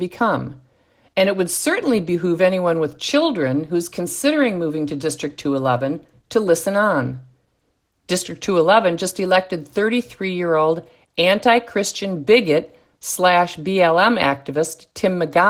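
Speech throughout its length carries plainly audible Opus voice compression, consistent with a bitrate around 16 kbps using the hybrid mode, where a linear-prediction coder handles the lower band and a transform layer covers the top. At this rate the excitation is coded coarsely, so the voice sounds hoarse and slightly robotic. On a spectrogram, the upper band would look sparse and smeared in 20 ms blocks, and harmonics would look blurred.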